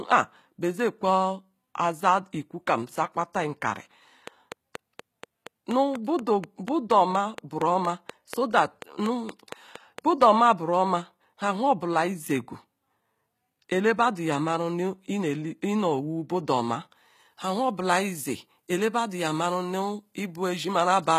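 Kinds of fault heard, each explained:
HE-AAC compression: The treble is likely rebuilt by spectral band replication from copied lower bands, at a bitrate that fits about 20 kbps. Sibilants sound gritty and metallic throughout. A spectrogram shows smeared, repeated upper bands and nothing above 14.9 kHz.
Train of clicks: From 4.28 to 10.23 s, evenly spaced ticks arrive about 4.2 times per second, roughly thirty in all, peaking around 10 dB above the speech. Interference is the likely cause. The waveform shows a regular row of sharp spikes, including in pauses.
Pre-emphasis left on: After "budu oma", from 16.95 s to the end, the treble is boosted about 8 dB at 10 kHz relative to 1 kHz, following the CD 50/15 µs curve with no matching cut. The speech turns thin and hissy, and the spectrogram brightens across the upper bands.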